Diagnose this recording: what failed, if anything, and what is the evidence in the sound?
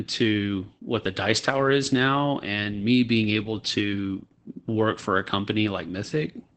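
Opus voice compression runs through the whole recording, a fault at the codec stage. The speech has no content above about 8.7 kHz, so it sounds muffled, and it is plainly hoarse and slightly robotic. Those traits point to Opus in its SILK linear-prediction mode at wideband. SILK models the vocal tract in 20 ms frames and quantises the excitation coarsely, which fits a bitrate of around 12 kbps.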